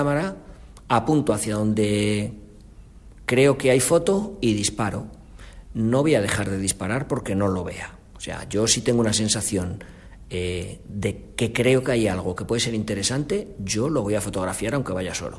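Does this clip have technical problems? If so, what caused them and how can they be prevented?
No, nothing stood out as a technical problem on listening, so there is nothing here to trace back or prevent.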